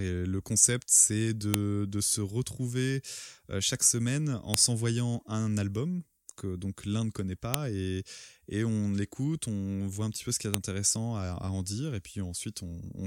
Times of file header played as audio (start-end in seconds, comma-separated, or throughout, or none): 1.54, 4.54, 7.54, 10.54